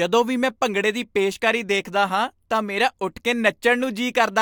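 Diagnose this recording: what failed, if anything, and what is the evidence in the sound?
Nothing in the chain seems to have failed here; I can't hear any point where the speech falters or picks up something it shouldn't.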